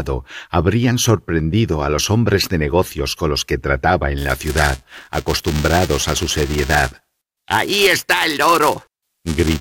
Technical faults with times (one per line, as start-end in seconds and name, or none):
4.18-9.61 buffer tearing